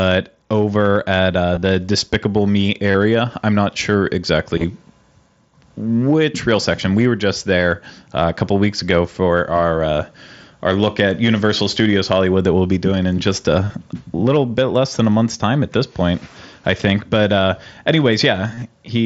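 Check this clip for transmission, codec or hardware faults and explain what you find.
There's concealed Bluetooth headset packet loss, five short bursts over the wideband mSBC headset link. They fall at 1.55–1.62 s right after "over at uh", 2.91–2.95 s just before "I'm not sure", 4.58–4.64 s, 13.65–13.73 s between "be doing in just" and "little bit less than", and 18.54–18.62 s.

Voice packets went missing, and the phone papered over each gap by repeating the best-matching bit of recent waveform. The longest runs of about 30 ms, at 1.55 s, 2.91 s and 18.54 s, give a brief buzzy hold with a slight warble. The losses at 4.58 s and 13.65 s are scattered, with runs of at most 15 ms.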